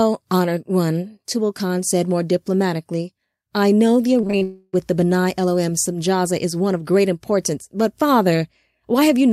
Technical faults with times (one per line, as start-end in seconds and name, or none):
4.21-4.43 repeated packet loss (robotic sound)
4.43-4.75 long network dropout